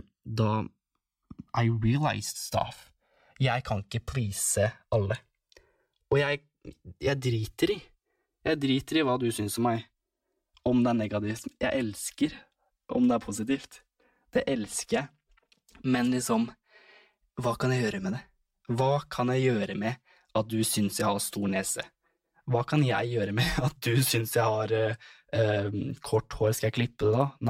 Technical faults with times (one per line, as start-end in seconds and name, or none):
0.00-27.49 channels drifting apart